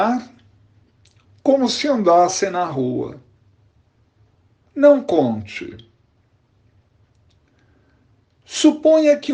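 Drift correction steps at 1.49–2.28 s and 5.41–6.15 s: the audio slows about 6.1% and drops roughly a semitone, then snaps back, likely from a clock-matching buffer adjusting its rate.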